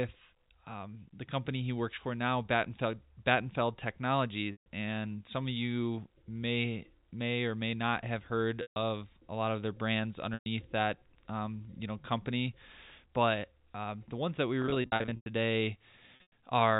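Packet loss with pitch repetition: dropped packets were bridged by repeating the last pitch period, so the sound briefly holds on a buzzy, sustained tone. This happens at 4.52 to 4.66 s; 8.62 to 8.76 s, between "may not have heard" and "a lot of their"; 10.34 to 10.46 s, between "lot of their brands" and "that um you know"; 14.62 to 15.26 s, after "the ones that we", where scattered gaps of up to 100 ms repeat; and 16.16 to 16.31 s. The G.711 telephone coding limits everything to below 4 kHz.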